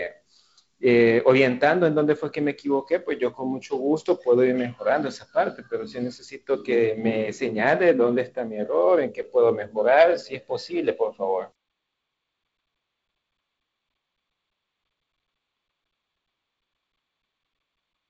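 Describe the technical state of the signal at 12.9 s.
At 12.9 s the speech is intact, carried through G.722 wideband telephone coding at what sounds like its 48 kbit/s mode, with nothing above about 7.7 kHz and only the light coding texture that mode leaves.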